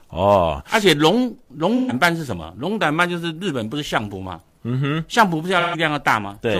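Two short dropouts in the speech, at 1.76 to 1.92 s and again at 5.60 to 5.76 s, are AAC frame loss with concealment. Each gap covers about 128 ms of lost audio, which fits three missing frames. The decoder papers over the hole by reusing the last good spectrum, so instead of a clean silence you get a brief smeared, noisy or phasey patch.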